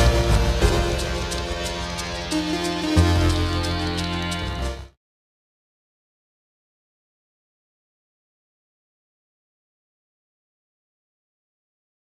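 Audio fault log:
Nothing stood out on listening, and the level eases down in a smooth fade-out from about 4 s that is complete by 4.97 s, with no click or hard edge.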